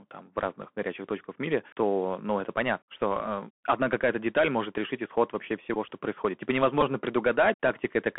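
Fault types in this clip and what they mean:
Bluetooth CVSD headset codec: The link carries the audio as one-bit up/down steps at 64 kHz with an adapting step size, and the line passes only about 200 Hz to 3.4 kHz. The speech sounds narrow and dull, with plainly audible granular hiss and scratchy, distorted sibilants.
Bluetooth headset packet repeated: Lost headset packets were replaced by decoding the previous packet's bits again. Around 5.74–5.77 s about 15 ms was repeated, and at 6.81 s about 11 ms. Each leaves a brief buzzy burr pitched near 267 Hz.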